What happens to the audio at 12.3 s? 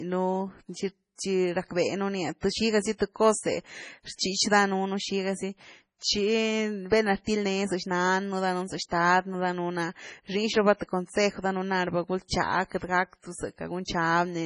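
Just before 12.3 s, from about 12.28 to 12.31 s, a pre-echo smears roughly 28 ms of hiss ahead of a sharp attack in the speech. A transform codec spreads quantisation noise evenly across its block, so noise sized for the loud onset also fills the quiet moment before it, and the attack sounds soft. On a spectrogram it appears as a faint broadband smudge preceding the onset. In the waveform, low-level fuzz builds up before the transient instead of clean silence.

Underneath, the whole passage carries heavy codec damage, likely from MP3 compression at a low rate, the sort of result a 24 kbps encode would give. Nothing sounds above 10.5 kHz, and weak frequency lines drop in and out from frame to frame, giving a watery, swirling texture and chirpy sibilants. A spectrogram shows a hard horizontal ceiling at 10.5 kHz with patchy, flickering holes below it.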